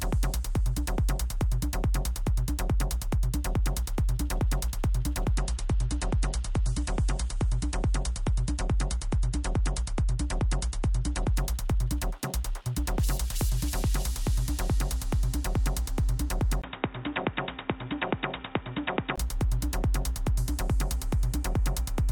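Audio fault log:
5.37–11.37 s, adaptive stream at a lower bitrate: The top end suddenly gets cut off, with nothing above 10.6 kHz, and codec artefacts rise. There's no gap, so the player must have dropped to a leaner version of the stream when the connection slowed, then stepped back up six seconds later. The sound fits a fall from roughly 128 to 40 kbit/s MP3.
16.62–19.18 s, input switched to a poorer device: At 16.62 s there's a 20 ms dropout, and then the sound goes dull and boxy. Nothing comes through above 3.8 kHz, the level sits a few dB lower, and new background noise appears well below the signal. All of that clears again at 19.18 s. The likely cause is the system jumping to a narrower-band input, such as a headset call profile, and then switching back.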